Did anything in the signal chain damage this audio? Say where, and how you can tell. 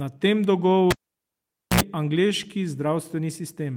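Yes, in the analogue wiring: a cable pulled and plugged in. A pop at 0.91 s drops the speech to near silence for 0.85 s. Then 64 ms of 60 Hz mains buzz as only the tip touches. A second pop restores sound at 1.81 s.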